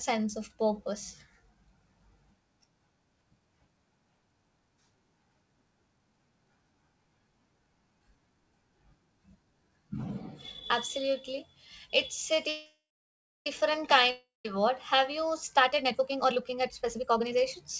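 At 12.49 s the speech stops and the last sound stretches into a fading buzz. It decays to silence, which lasts about 0.64 s. At 13.47 s the speech resumes exactly where it left off. This is a call audio freeze. Packets were likely held up in transit, so the jitter buffer ran dry. About 0.97 s of filler was inserted, but no speech was lost. The rest of the speech now plays that much later.

At 14.11 s there is a second break. The last sound again smears into a fading hiss, then about 0.16 s of silence. The speech returns at 14.45 s, but it picks up further on. This is a long network dropout. Audio likely never arrived for this stretch. About 0.34 s of speech is simply gone, and 0.34 s of filler sits in its place, so the speech jumps ahead.

From 15.57 s to 17.44 s the speech rushes. It runs at about 145% of normal speed, yet the pitch stays put. This is a jitter buffer speed-up. The buffer had built up extra delay after the earlier stalls. 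To shed it, the receiver cut many tiny pitch-period slices out of the signal, roughly a second in total. The speech sounds hurried, and nothing above 8 kHz is present in it.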